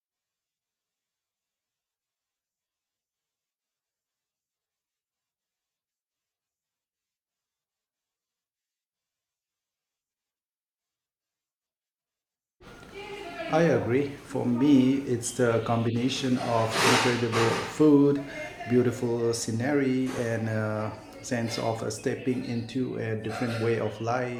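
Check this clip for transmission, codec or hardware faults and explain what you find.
One transmission fault is present. At 20.18 s, between "beautiful scenery" and "and a sense of", a tiny skip breaks the speech. It comes from an overlap between stream segments: two segments' time stamps overlapped, and the player trimmed a few milliseconds of real audio, with segments 6 seconds long, so the waveform jumps.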